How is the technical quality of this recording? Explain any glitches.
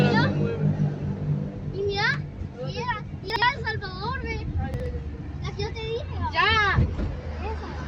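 The recording has two short glitches caused by chunks out of order, at 3.3 to 3.42 s and again at 4.74 to 4.86 s. In each, two 60 ms chunks are swapped, so the later chunk plays first and the delayed one follows. Nothing is lost, but the sound briefly jumbles, with three hard joins. A waveform shows abrupt discontinuities at those boundaries, and a spectrogram shows thin vertical broadband lines with mismatched content on either side.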